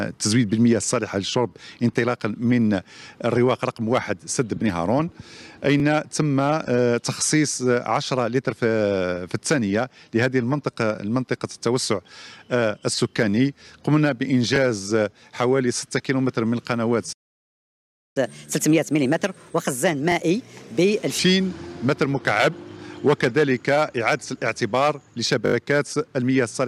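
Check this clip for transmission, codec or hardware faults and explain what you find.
Three kinds of playback fault are present: repeated buffers, a playback stall, and a catch-up at higher speed.

Repeated buffers occur at 5.80, 14.56 and 20.12 s, where one 20 ms block plays a second time, and at 25.46 to 25.54 s, where the same block plays four extra times. Each time, fresh audio missed its deadline, so the device resent the last 20 ms it held. The single repeats come across as brief clicks or stutters. The longer run at 25.46 s becomes a short buzz repeating every 20 ms. On a waveform the identical segments sit side by side with abrupt joins. A spectrogram shows thin vertical edges there, with a 50 Hz comb in the longer run.

A playback stall runs from 17.12 to 18.17 s. The output goes silent for about one second, then resumes. The likely cause is a player that ran out of data or had its thread blocked. 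You hear the sound cut off mid-flow and come back after a noticeable gap. The waveform drops to a flat line across that second, and the spectrogram shows a clean blank column with hard edges at both ends.

Catch-up at higher speed follows immediately, from 18.17 to 21.19 s. To recover the time lost in the stall, the player resamples its backlog at 1.25 times normal rate. Speed and pitch therefore rise together by roughly four semitones, then fall back to normal at 21.19 s. On a spectrogram, harmonics and formant bands shift upward and events crowd closer together across that span. The waveform looks compressed in time.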